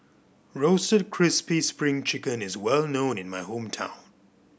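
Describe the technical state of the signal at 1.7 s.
At 1.7 s the speech signal is intact, with no audible technical fault.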